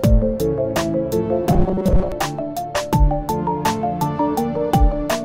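From 1.50 to 2.12 s the audio turns into a rigid, metallic buzz locked at 188 Hz, a robotic sound from repeated short buffers. The likely cause is starved playback looping a roughly 5.3 ms chunk, so most of that stretch is repeats while the real audio is skipped.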